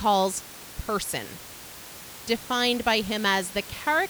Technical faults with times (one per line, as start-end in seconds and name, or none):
none